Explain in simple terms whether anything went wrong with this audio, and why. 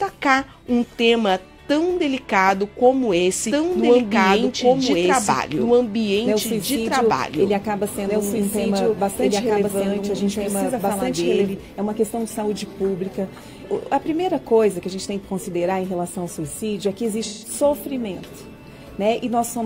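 Yes, two things went wrong.

From 3.51 to 11.53 seconds there is a doubled audio track. A second copy of the same sound plays about two seconds behind the first and roughly as loud, so everything is heard twice. It is not a room echo, because the copy doesn't fade away or sound roomy. It starts and stops abruptly. The likely cause is the sound being recorded twice by two routes, one slower than the other.

From 17.23 to 17.53 seconds there is AAC frame loss with concealment. For about 0.17 seconds, a few chunks of the compressed audio went missing, which points to four lost frames. The player covered the gap by guessing from the sound just before it, so the audio turns briefly smeared and hissy instead of dropping out. That smearing is what separates it from a clean cut or a skip.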